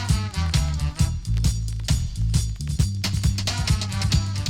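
At 4.07 s a corrupt frame decoded: damaged bits in a single compressed frame misplaced spectral energy, producing a brief chirp, squeak, blip or burst of noise peaking around -25 dBFS.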